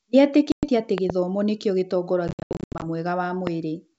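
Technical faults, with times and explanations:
0.52–0.69 s, packet loss on an ADPCM call: about 110 ms of audio drops to silence with hard edges. The decoder's predictor then mistracks, so speech returns slightly distorted.
0.98–1.12 s, loud pop: two sharp pops, roughly 15 dB above the speech, sit on top of sound that continues underneath, likely from a plug, switch or static discharge.
2.28–2.85 s, packet loss on an ADPCM call: about 380 ms lost in holes scattered over 540 ms, the longest 80 ms. Each resumption is slightly distorted until the adaptive step size resettles.
3.47 s, loud pop: a single sharp pop, roughly 10 dB above the speech, on top of continuing sound, likely a voltage step from a plug, switch or static.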